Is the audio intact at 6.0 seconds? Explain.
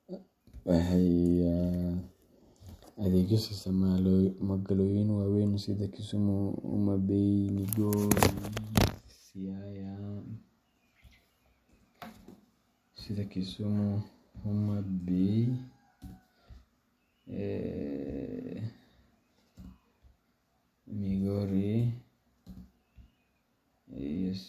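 Yes, the audio is intact at 6.0 seconds, with no audible fault at that point in the speech.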